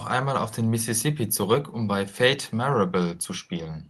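No technical faults can be heard in the speech. Faint room noise sits about 40 dB below it, and the high end stops near 12 kHz, which fits a call path using Opus at around 32 kbps.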